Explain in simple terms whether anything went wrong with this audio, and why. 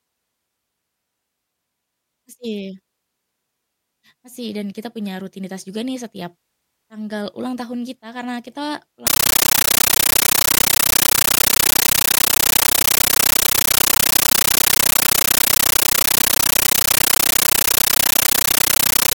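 From 9.07 s to the end, the speech turns into loud, chattering static. That's a compressed stream played as audio: what sounds like Dolby Digital data was sent out undecoded, so you hear 13 ms noise bursts about 31 times a second.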